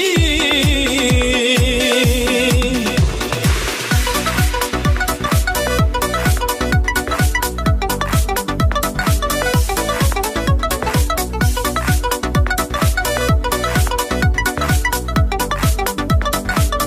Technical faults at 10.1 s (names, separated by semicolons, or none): none